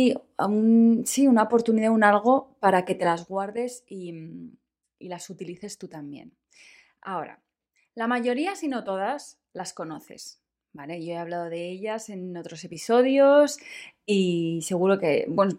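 No technical faults can be heard in the speech at any point.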